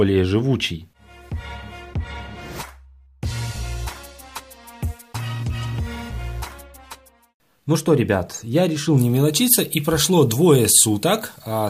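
Pre-emphasis left on from 8.98 s to the end: an FM-style 75 µs treble boost was never undone, leaving 10 kHz about 13 dB hot, so the sound turns thin, bright and sibilant.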